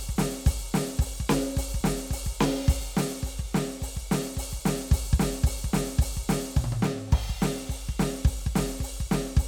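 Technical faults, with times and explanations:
No technical faults can be heard anywhere in this music clip.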